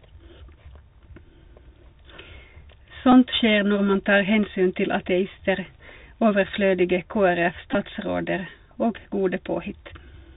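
Bluetooth CVSD headset codec damage runs through the whole of this speech recording, plainly audible from start to finish. The headset link codes each sample as a single up-or-down bit at 64 kHz with an adapting step, which fits a 64 kbps CVSD stream. Nothing above 4 kHz survives, so the speech sounds narrow. Loud bright passages outrun the step size and distort, sibilants turn scratchy, and a granular hiss sits beneath everything. Bluetooth headset packet repeated faults appear at 3.12 s and again between 7.72 and 7.75 s. When voice packets between headset and phone fail, the chip decodes the previous packet's bits a second time. The first event replaces about 7.5 ms, consistent with two lost packets. The second loses 22.5 ms scattered across 30 ms, which points to around six lost packets, with the longest unbroken run about 10 ms. That run repeats every 3.75 ms and so gives a brief buzz near 267 Hz before good packets return.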